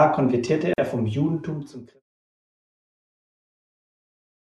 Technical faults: gap at a join of encoded pieces

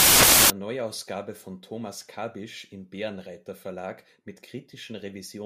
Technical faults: samples built from the wrong bytes

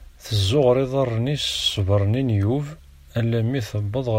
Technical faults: none

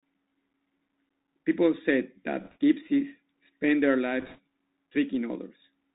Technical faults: Bluetooth CVSD headset codec; bit errors on a Bluetooth voice link

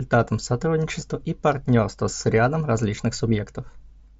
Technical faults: concealed Bluetooth headset packet loss

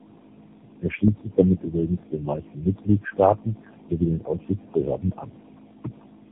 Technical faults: tandem speech coding

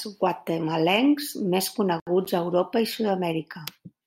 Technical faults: gap at a join of encoded pieces

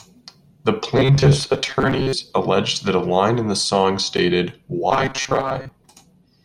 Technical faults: robotic sound from repeated short buffers

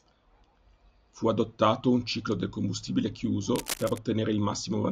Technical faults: cable scratch noise

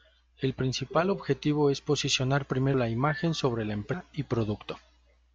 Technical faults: compressed frames skipped

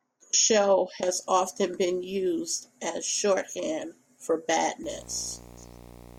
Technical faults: video or display buzz

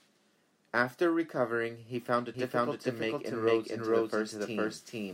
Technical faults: doubled audio track

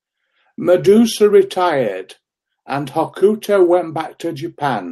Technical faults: none

